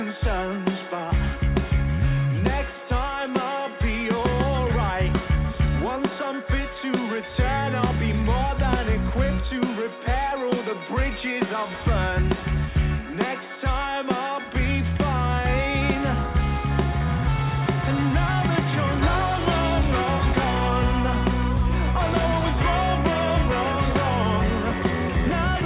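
No dropouts, clipping, glitches, rate errors or other transport or processing faults can be heard anywhere in the recording.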